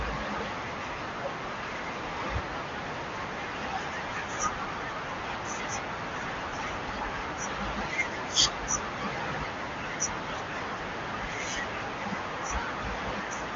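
No technical faults occur in the clip, so there is nothing to describe in time order.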